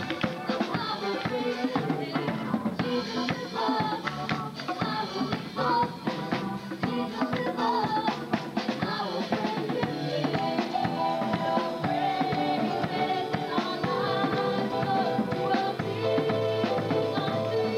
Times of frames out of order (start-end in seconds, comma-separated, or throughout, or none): none